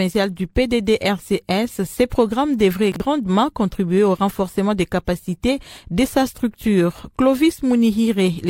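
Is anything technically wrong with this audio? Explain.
Yes, there's one glitch. Between 2.92 and 3.0 s you get chunks out of order. A 40 ms chunk arrived one chunk late, so it played after the chunk that should have followed it, and the two end up swapped. Nothing's actually missing, but the sequence is scrambled and there are three hard joins where the waveform doesn't line up. So that spot comes across as a quick jumbled stutter.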